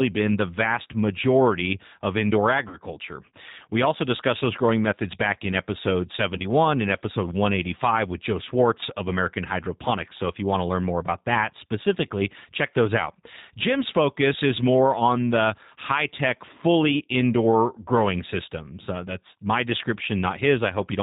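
The whole clip runs through the G.729 codec at 8 kbit/s, so nothing above 4 kHz survives and the speech sounds plainly rough and a bit synthetic. At 2.68 to 2.78 s, there's VoIP packet loss concealed by the speech codec: about 40 ms went missing, which fits two 20 ms packets. The decoder stretches its last frame into a fading buzzy tone or coloured noise, and the sound stays weak briefly afterwards. The same thing happens at 6.38 to 6.47 s, with a shorter 20 ms gap.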